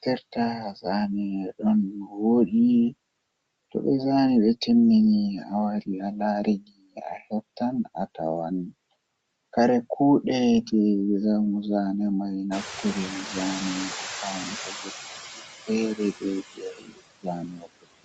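Noise suppressor artifacts run through the whole clip. The suppressor pulls what it judges to be steady noise down by about 21 dB, frame by frame, so the background sinks in pauses and resurfaces under speech. That frame-to-frame pumping separates it from a plain static noise floor.

Speech cut by the noise suppressor happens at 0.05–0.86 s, 1.44–2.53 s, 6.6–8.17 s, 12.83–13.36 s, 14.44–16.23 s and 16.55 s to the end. Quiet consonants and word endings are mistaken for noise and dropped by about 9 to 21 dB. They sound swallowed rather than clipped or muted outright.

The noise suppressor catching up shows from 12.51 to 14.99 s. The room noise jumps by about 20 dB near 12.5 s, and the suppressor's estimate lags. At first the noise comes through with only about 8 dB of reduction, then it sinks gradually over roughly 2.5 s. That slow fade marks adaptation, not an abrupt gate.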